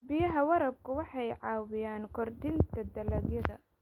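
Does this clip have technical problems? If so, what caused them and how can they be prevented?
No, this clip has no technical problems, so there is nothing to trace to a cause or prevent.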